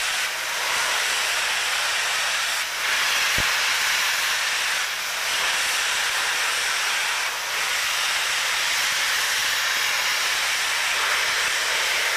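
At 3.38 to 3.42 s a single loud pop stands out at roughly 10 dB above the surrounding sound, likely a voltage step from a plug, switch, static or driver glitch. Unlike a dropout or gap, the sound continues unbroken beneath the pop.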